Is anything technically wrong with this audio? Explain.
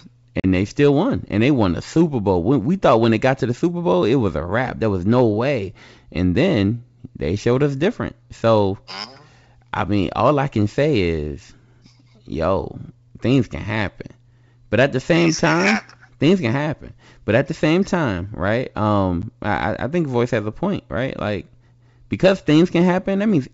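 Yes. Packet loss on an ADPCM call occurs at 0.40 to 0.45 s, just before "they still won and", and again at 19.22 s, between "the same time right" and "I I think voice". About 40 ms goes missing the first time, a few packets' worth, and about 10 ms the second, likely a single packet. Each gap becomes hard-edged silence. Because the G.722 decoder's adaptive predictor and step size no longer match the sender's, speech resumes briefly with slight distortion.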